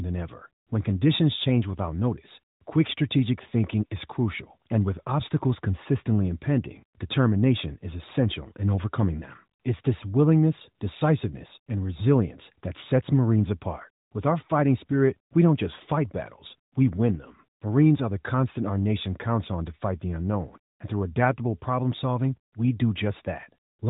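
No faults can be heard anywhere in this recording.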